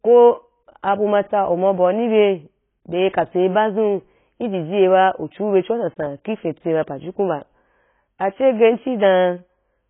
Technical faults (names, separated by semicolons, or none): AAC compression; pre-echo